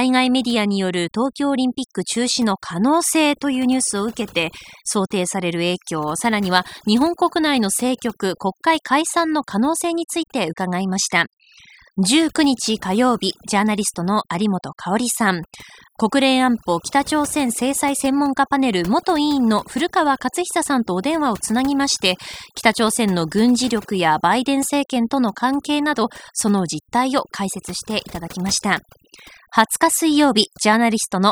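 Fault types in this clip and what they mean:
Overdone noise removal, throughout: the noise reducer was pushed too hard, cutting individual frequency bands whenever they sank toward its noise estimate, so the pauses drop and break up into twinkling specks, and quieter parts of the speech are stripped away.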